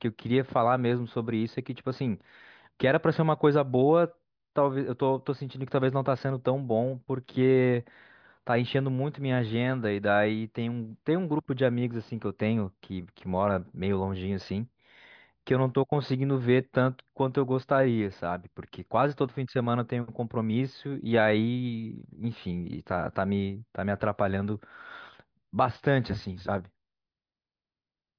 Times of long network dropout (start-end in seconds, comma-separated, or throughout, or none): none